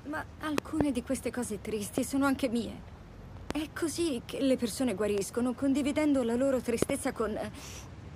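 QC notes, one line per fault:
0.58–0.83, 1.98–2.00, 3.51–3.53, 5.18–5.20 and 6.83–6.92 s, loud pop: seven sharp pops, doubled at 0.58 s and 6.83 s, standing roughly 15 to 25 dB above the sound. Each is most likely a brief voltage pulse from a switch, plug, static or driver glitch, shaped into a short thump by the circuitry after it. Unlike a dropout or digital click, the sound carries on unbroken beneath each pop, with nothing missing.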